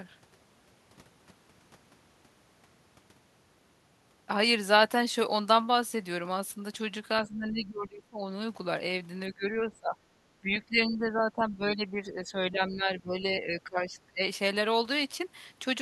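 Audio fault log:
7.23–8.18 s, 9.29–10.24 s, 10.41–14.26 s, speech suppressed in double talk: the speech sinks by about 20 dB in the first two stretches and about 15 dB across the roughly four-second third, likely because an echo canceller could not separate the near-end talker from the loudspeaker echo of overlapping far-end talk and attenuated both.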